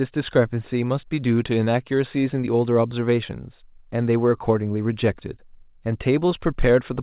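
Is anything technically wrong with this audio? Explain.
No technical faults are audible.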